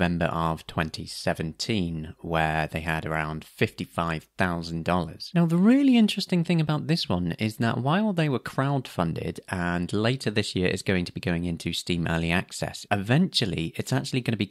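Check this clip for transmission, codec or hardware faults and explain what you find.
Nothing stood out on listening to the speech in this recording.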